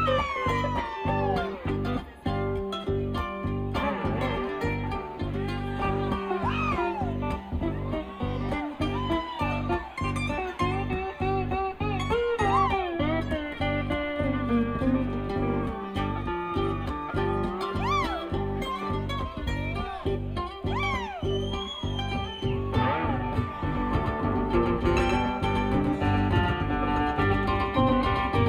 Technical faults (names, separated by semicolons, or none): doubled audio track